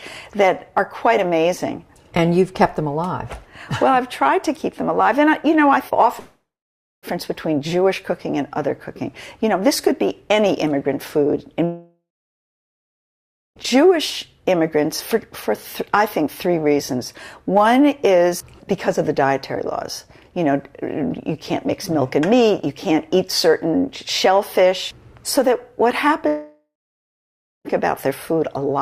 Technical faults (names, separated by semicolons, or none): long network dropout